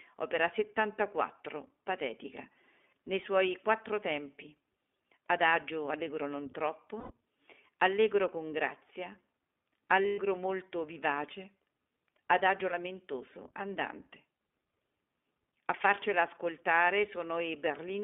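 iLBC codec, throughout: the speech is squeezed into a 250 Hz to 3.5 kHz telephone band and coded in independent 20 ms frames, leaving it plainly rough and synthetic, consistent with the 15.2 kbps mode.

Lost iLBC frames at 7.00 to 7.12 s (just after "allegro non"), 10.03 to 10.19 s (just before "molto vivace") and 14.36 to 14.40 s (just after "adagio lamentoso andante"): missing packets made the decoder repeat the last pitch cycle with added noise, heard as a held, buzzy vowel. The first gap lasts 100 ms. The second scatters 140 ms of loss across 160 ms, its longest stretch about a tenth of a second. The third lasts 40 ms. Because each frame stands alone, the speech recovers almost immediately after every gap.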